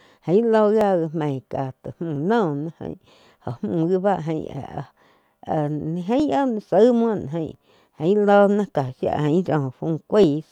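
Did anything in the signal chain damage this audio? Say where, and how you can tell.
Yes. Clock drift buffer slips occur at the buffer between two devices: a click every 1.35 s from 0.81 s to 10.24 s, about seven in all. The clocks likely differ by around 500 ppm, so some 30 samples are dropped or repeated each time. Each click shows as a thin vertical spectrogram line and a waveform discontinuity.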